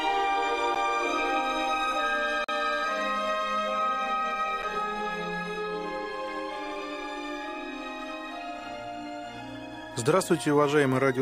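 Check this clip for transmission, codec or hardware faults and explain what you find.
There are three blocks of digital silence, at 0.75 s, 2.44 to 2.49 s, and 4.62 s. The audio drops to zeros and back abruptly. The first two gaps fit 512- and 2048-sample buffers left unfilled. They sound like ticks, with the 43 ms gap a brief hole.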